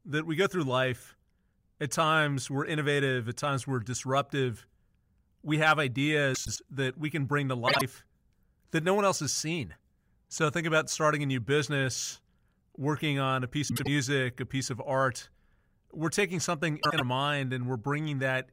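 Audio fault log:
6.34–6.58 s, 7.67–7.81 s, 13.68–13.88 s, 16.82–17.01 s: frames out of order. Two adjacent blocks of audio swap places (104.5, 52.2, 78.4 and 78.4 ms respectively), after "we can bring to", after "business working on a" (before "a piece of art") and after "we're taking something". Each swapped stretch plays as a garbled flutter, with no time lost.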